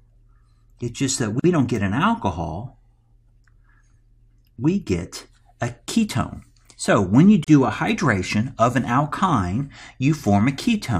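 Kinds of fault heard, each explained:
Gap at a join of encoded pieces: separately encoded segments were joined untrimmed, leaving encoder start delay and final-frame padding as silence. Here continuous sound drops out for 46 ms at 1.40 s and 37 ms at 7.44 s, joins six seconds apart, then resumes where it stopped.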